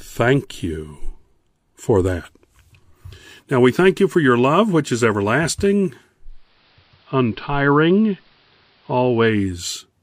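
At 6.23 s, after "love which is everlasting", the receiver blends digital radio to analogue, cross-fading over 0.43 s to the AM broadcast. Level drops about 1 dB, and hiss appears around 35 dB down until 9.66 s.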